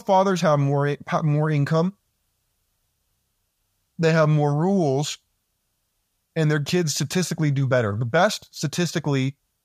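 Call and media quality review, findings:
No faults found in the speech clip. Nothing heard warrants a ticket entry.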